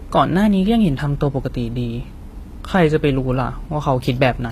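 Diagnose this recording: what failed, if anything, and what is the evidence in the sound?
The failure sits at the codec stage, with HE-AAC compression the likely cause. Throughout the speech the top end is extended but synthetic: s sounds come out gritty and lispy, and nothing is present above 14.9 kHz. That points to spectral band replication, where only the lower band is truly coded and the treble is rebuilt from copied lower bands under a coarse envelope, so its harmonics fail to line up. The damage is plainly audible, which fits a low bitrate around 24 kbps.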